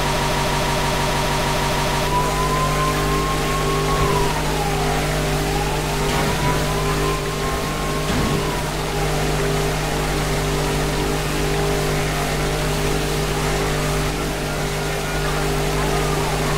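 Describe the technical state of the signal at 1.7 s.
At 1.7 s the playback chain has likely stalled and keeps resending its last buffered fragment, a broken-record loop already under way when the audio begins and running to 2.07 s. A 0.16 s slice repeats exactly, back to back, twelve times, and the audio meant for that span is lost.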